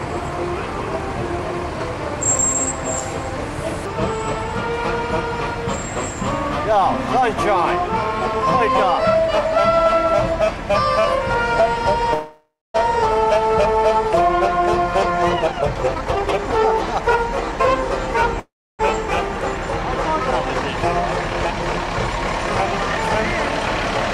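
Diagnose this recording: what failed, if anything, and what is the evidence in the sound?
Call audio freeze at 12.13 to 12.76 s and 18.40 to 18.81 s: the last sound fades then goes silent, and the audio resumes intact, likely from delayed network packets draining the jitter buffer.

Jitter buffer speed-up at 15.34 to 16.73 s: the audio runs at 132% speed without a pitch change, as the receiver removes repeated pitch periods, roughly half a second in total, to cut the delay.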